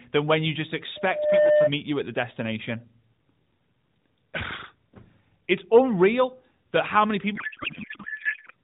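From 0.95 to 1.71 s, a loudspeaker feedback squeal rises at 601 Hz. The microphone-speaker loop howls, swelling over roughly 0.4 s to a few dB above the speech.

From 7.36 to 8.53 s, a codec payload misread turns the speech into garbled warble. This fits octet-aligned AMR frames being unpacked as bandwidth-efficient.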